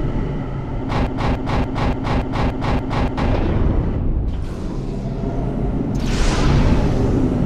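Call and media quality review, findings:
Broken-record loop, 1.07–3.18 s: a 0.29 s fragment of sound replays back to back, seven times, identical each pass. Likely a stalled player or stream buffer resending its last held chunk. Material due in that window never plays and is lost.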